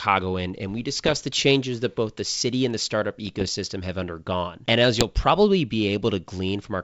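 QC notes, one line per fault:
1.04–1.17 s, 3.27–3.57 s and 4.96–5.04 s: bit errors on an ADPCM link. You get pops and rough, gritty bursts with quick level jumps. Each flipped bit knocks the decoder's step size and predictor off, so the damage rings on briefly rather than clicking once, and the longer middle burst has the lightest error rate.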